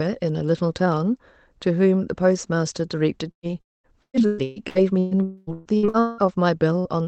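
At 3.31 to 3.46 s a burst of packet loss removes about 120 ms. The last sound is continued and fades out, and the audio then resumes further on with that piece missing.

From 3.61 to 3.98 s the sound is continued and fades, then goes silent for about 210 ms. Roughly 240 ms of audio never returns, the likely result of a long network dropout.

Overlapping its end, from 3.90 to 5.14 s, repeated packet loss leaves seven gaps, the longest 120 ms. Each is patched from the preceding sound, so about 44% of the stretch is concealed and it comes across as choppy and robotic.

From 5.23 to 5.50 s another 240 ms is lost, this time filled entirely with a decaying continuation and no silence, again likely a long network dropout.

From 5.53 to 6.27 s four more gaps, the longest 183 ms, leave 60% of the span concealed, again choppy with pieces missing.

At 6.79 to 6.88 s a final burst of packet loss drops about 60 ms, heard as a brief smeared hold before the audio resumes.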